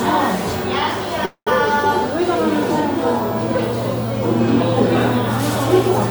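A call audio freeze runs from 1.25 to 1.49 s in this recording of sounds. The last sound before it is drawn out into a fading buzz or hiss that ends in about 100 ms of silence, and the material then picks up exactly where it stopped. About 212 ms of filler has been inserted, nothing is lost, and everything after it sits 212 ms later. The likely cause is packets held up in transit, leaving the receiver's jitter buffer empty until they arrived.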